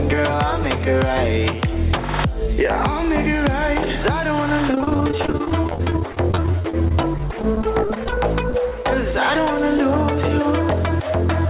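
The audio carries gain pumping throughout, with level swings of roughly 10 dB. Loud and soft parts sit close together, so the sound is squashed. The likely cause is input gain set far too high, with a fast limiter pulling it back on every peak. From 4.71 to 8.13 s there is repeated packet loss, which gives a robotic sound. Dozens of short holes, the longest about 34 ms, are patched by stretching the last sound. About a quarter of this stretch is filled in this way, so the sound turns choppy, with pieces missing. Two short concealed packet losses follow, at 8.50 to 8.54 s and at 8.69 to 8.72 s. Each gap is bridged by continuing the previous sound and then blending back. This is heard as a brief smear or wobble. The call path's band limit is audible as nothing above 4 kHz, which fits a narrowband G.711 mu-law call.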